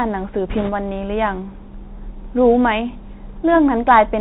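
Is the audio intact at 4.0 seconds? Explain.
No, at 4.0 s you're still hearing the Bluetooth CVSD headset codec that runs the whole clip: one-bit up/down steps with an adapting step size, nothing passing above 4 kHz, with scratchy s sounds and granular hiss.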